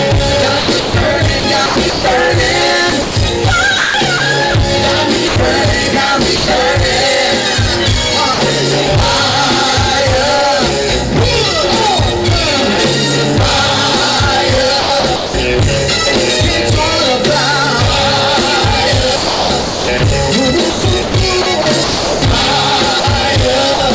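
Hard clipping runs through the whole clip. The signal is overdriven by about 16 dB, so nearly a third of the waveform is flattened against the converter's limit. The squared-off peaks produce dense upper harmonics, heard as a continuous harsh fuzz on every loud passage.

Sound chopped by the voice detector first appears from 0.60 to 2.04 s, with about 0.5 s in total replaced by comfort noise, and again from 2.90 to 4.20 s, with 0.34 s replaced. The sound stutters in and out. This is likely the sender's voice detector gating repeatedly.

Sound dropped by the voice detector follows in three short gaps, at 5.28–5.36 s, 6.36–6.48 s and 8.34–8.38 s. Each loses 40 to 120 ms of sound, replaced by steady comfort noise. This is likely the detector mistaking quiet material for background.

Sound chopped by the voice detector returns from 14.80 to 15.34 s, with 0.32 s replaced. The longest stretch runs from 19.16 to 23.80 s, with 1.46 s substituted. 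Both are likely the same gating. The chopping sits against the G.722 call path's band limit, which leaves nothing above 8 kHz.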